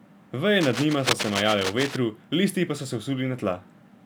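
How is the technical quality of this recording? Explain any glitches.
The recording has one clear glitch. From 0.60 to 1.96 s there is cable scratch noise: a worn cable or connector being moved likely made its contact resistance jump about, adding dense, uneven scratching almost as loud as the speech.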